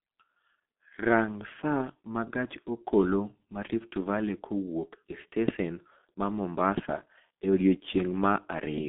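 From start to finish the speech passes through a G.723.1 codec. Nothing above about 3.7 kHz survives, and the coarse 30 ms framing, which fits a rate near 6.3 kbit/s, leaves it muffled and hoarse with smeared consonants. A plain band limit would dull the sound without that rasp.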